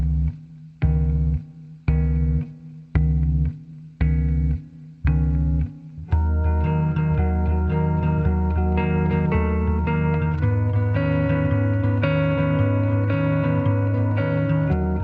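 No technical faults heard.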